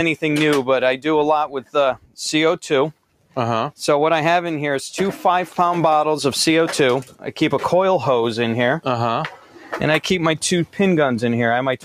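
A noise suppressor meant for speech has been applied to music or other sounds throughout the audio, mistaking sustained material and ambience for noise. Level swings by around 5 dB as it clamps down on held portions and releases on attacks, so the sound pumps and thins. On a waveform the envelope breathes unevenly. On a spectrogram sustained bands and decay tails fade in patches while transient onsets stay bright and vertical. The suppressor also cuts specific sounds: from 1.95 to 2.17 s and from 2.94 to 3.36 s the level drops by about 12 dB, and from 9.36 to 9.76 s by about 11 dB. Each time it treats a steady or decaying stretch as noise and attenuates it harder than its surroundings. The waveform shows short notches or collapsed tails lasting a fraction of a second, and the spectrogram shows those regions dimming sharply across the band before recovering.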